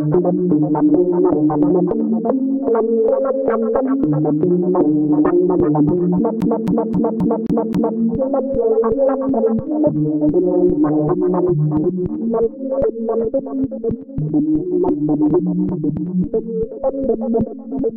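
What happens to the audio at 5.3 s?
Nothing goes wrong at 5.3 s; the sound passes through that moment intact, with no dropout, click or other technical fault.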